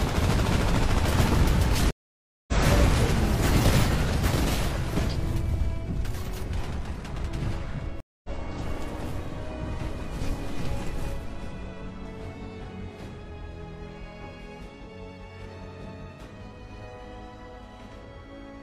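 At 1.91 s and again at 8.00 s a stream reconnect cuts the audio: a dropout of 0.57 s, then 0.24 s, after which a fresh decoder resumes roughly 0.3 s further on. The waveform shows a flat gap and a jump, with a fade-in. From 16.70 s to the end a doubled audio track appears: an equally loud, full-band copy trails by about a tenth of a second, likely from a second, slower capture path. The spectrogram shows every onset repeated, with no decay.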